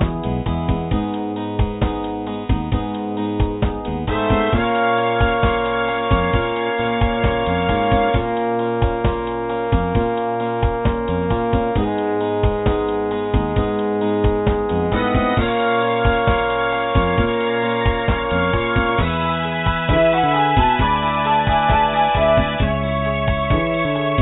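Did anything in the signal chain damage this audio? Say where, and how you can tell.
No, nothing in the signal chain damaged this audio that I can hear.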